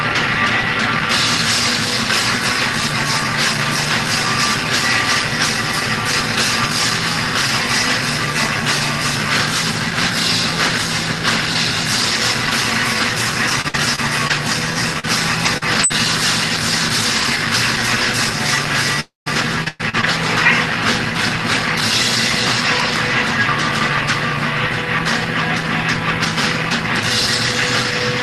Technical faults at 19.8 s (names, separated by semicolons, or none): repeated packet loss (robotic sound)